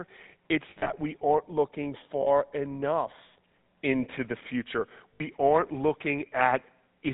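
Speech with a buzzy, gravelly roughness and nothing above 4 kHz, typical of the GSM full-rate codec, which fits its 13 kbps pulse-excited vocal-tract model. At 0.70–0.93 s, 2.22–2.28 s and 5.14–5.21 s the sound briefly freezes into a rough metallic ring. These are lost GSM frames patched by repeating the last good frame; the first stretch scatters about 120 ms of gaps, the longest run around 70 ms.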